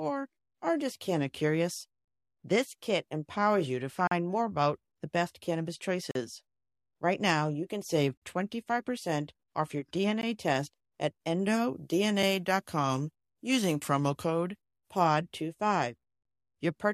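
A speech recording in which the sound cuts out with hard edges four times, at 4.07–4.11 s, 6.11–6.15 s, 8.17–8.22 s and 10.21 s, each hole lasting about 16 to 45 ms. The roughly 2-second spacing points to gaps between stream segments, where mismatched time stamps leave short holes that the player fills with silence. From 11.40 s to 15.07 s the speech turns thin, bright and sibilant, with the treble about 11 dB too strong at 10 kHz relative to 1 kHz. This is pre-emphasis left on: the boost follows the 50 µs FM curve, and the matching de-emphasis cut was never applied.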